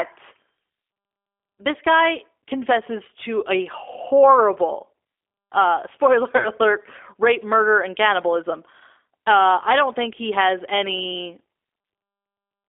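Speech that sounds narrow, rough and slightly synthetic throughout, confined to roughly 300 Hz to 3.5 kHz, is the mark of the G.729 codec, an 8 kbit/s coder that rebuilds the voice from a few pulses and a filter model. From 6.37 to 6.49 s the sound smears into a fading buzzy tone or coloured noise before recovering. That is VoIP packet loss concealed by the speech codec: a 30 ms gap, which fits one lost packet, was filled by extrapolating the last frame, and the effect lingered while the decoder recovered.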